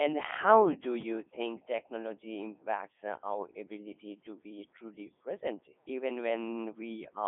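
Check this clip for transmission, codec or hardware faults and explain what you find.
The whole clip has passed through a Codec 2 vocoder. The damage is heavy and lasts throughout. The speech sounds robotic and buzzy. Codec 2 does not keep the waveform. It sends only pitch, voicing, energy and a rough spectral envelope. The decoder then rebuilds the voice from sine waves. It runs at its highest mode, around 3.2 kbit/s. The sound is confined to a line band of roughly 250 Hz to 3.6 kHz. Nothing is heard above 3.8 kHz.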